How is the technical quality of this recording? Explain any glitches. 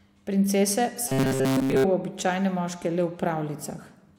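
The recording has one clear glitch, a robotic sound from repeated short buffers. From 1.08 to 1.86 s the speech becomes a rigid metallic buzz near 133 Hz, most likely because late audio was covered by looping a roughly 7.5 ms chunk, skipping most of this stretch. A spectrogram shows flat, evenly spaced harmonics at multiples of 133 Hz, and the waveform shows identical repeating cycles.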